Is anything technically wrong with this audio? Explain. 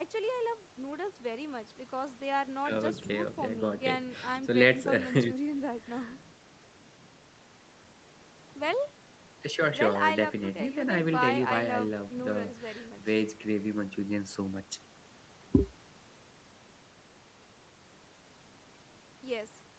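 No, nothing in this speech recording stood out as a technical problem on listening.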